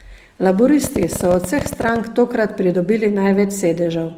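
From the very start and right through to the end, the speech carries plainly audible Opus compression damage. The bandwidth stays full, so the sound isn't muffled, but it has turned rough and grainy, with a noisy fizz where finer detail should be. That points to the encoder working in its music-style CELT mode at a low rate, something around 24 kbps, where it likely ran short of bits and filled bands with folded or noise-like content.

From 0.84 to 1.97 s a train of clicks rides over the speech, about 16 ticks a second, roughly twenty in all, spaced unevenly rather than as a steady beat. They pop out sharply, reaching about 10 dB above the speech, and they sound much alike from one to the next. Pulses repeating like that likely come from electrical interference or a faulty connection or power supply.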